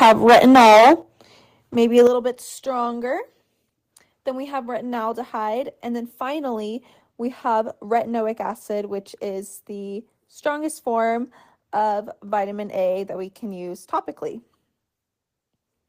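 Harsh, crackling distortion sits on the speech from 0.01 to 0.93 s, with the peaks flattened so hard that roughly a third of the samples are squared off, and it returns more mildly from 1.97 to 2.07 s, where about a tenth are cut. This is microphone overload: the input was likely driven about 14 dB past the converter's ceiling at the start and about 4 dB past it later, so the waveform tops are sheared away and the loudest syllables turn gritty. Alongside this, the level of both speech and background drops abruptly three times, by about 2 dB at 0.03 s, about 9 dB at 1.02 s and about 8 dB at 2.07 s. These steps are the microphone volume being stepped down, likely by the call software reacting to the clipping and cutting the device's input volume in single jumps, the last one landing right as the second burst of distortion ends.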